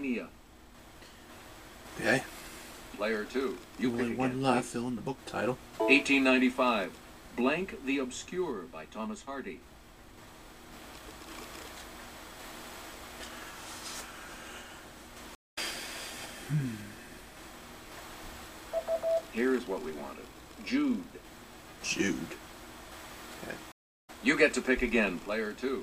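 Stream reconnect at 15.35 s: the connection drops and the audio goes silent for 0.22 s until 15.59 s. A fresh decoder then picks up the stream mid-flow, and the sound resumes at a point roughly a fifth of a second later than where it stopped, so that stretch is skipped. A second stream reconnect at 23.72 s follows the same pattern, with a 0.36 s silence ending at 24.10 s and the audio jumping ahead by about 0.3 s.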